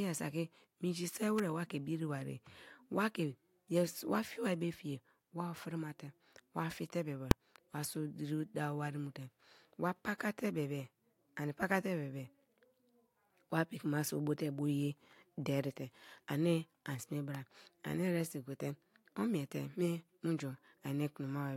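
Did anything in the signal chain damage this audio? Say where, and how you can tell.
Yes. In the analogue wiring, an electrical switching spike, likely from a nearby switch, motor or static discharge arcing onto the line, adds a sharp snap at 1.39 s, just after "saki minji se", and again at 17.35 s, after "derite ani an sme".

At the processing and sample-format conversion stage, invalid numbers at full scale appear at 7.31 s, between "wa fie te bebe" and "wa so diri dawo". A calculation produced invalid values that were pinned to full scale for about 1.45 ms, which fits a 64-sample block, so it is heard as a single loud bang.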